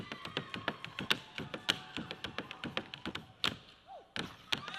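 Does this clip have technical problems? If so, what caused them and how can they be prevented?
Yes. Compressed frames skipped at 1.05–1.09 s and 3.09–3.14 s: the audio jumps ahead by roughly a fifth of a second, which fits about ten lost 20 ms frames. Verifying file integrity after transfer and using error-protected delivery with retransmission keeps damaged frames from being dropped.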